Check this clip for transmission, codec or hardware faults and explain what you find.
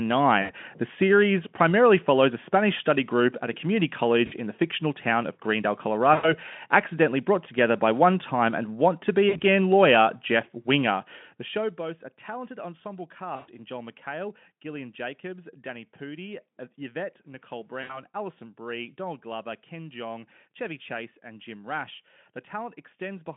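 The speech has one kind of fault, which happens six times. It is VoIP packet loss concealed by the speech codec. It occurs at 0.41–0.52 s, 4.25–4.33 s, 6.13–6.34 s, 9.29–9.42 s, 13.35–13.49 s and 17.81–18.03 s. The gaps range from about 60 to 120 ms, which fits 20 ms frames. At each gap, the decoder repeats its last pitch and filter at falling gain. The speech smears into a buzzy tone or coloured noise that fades, and stays weak or distorted just after each gap. All of this sits on a narrow line, roughly 150 Hz to 3.5 kHz, carried by the Speex codec.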